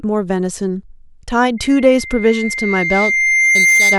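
From 1.57 s to the end, loudspeaker feedback squeal: a single 2.1 kHz tone swells over about two seconds to sit slightly above the speech, unlike a steady interfering tone.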